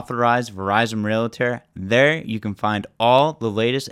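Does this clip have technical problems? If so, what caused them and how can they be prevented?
Yes. A single sharp click sounds at 3.19 s in this speech. The likely cause is dropped samples: a couple of samples, well under a millisecond, went missing, so the waveform jumped straight to a later value. Keeping buffers large enough that the audio stream never underruns prevents it.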